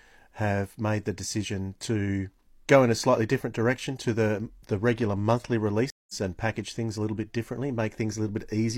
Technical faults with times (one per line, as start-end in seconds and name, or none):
5.90-6.14 stream reconnect